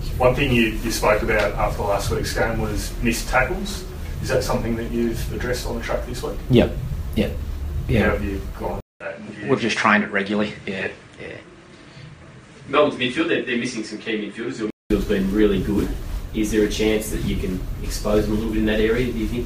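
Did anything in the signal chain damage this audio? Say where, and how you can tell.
Yes. From 8.80 s to 14.90 s the sound turns duller and about 5 dB quieter, with nothing above 9.7 kHz, a new noise floor about 45 dB below the signal, and a 200 ms silence at the switch. It clears again at 14.90 s. At the driver and device stage, this is likely an input switched to a poorer device: the system rerouted capture to a narrower-band microphone or headset path with its own level and noise, then switched back.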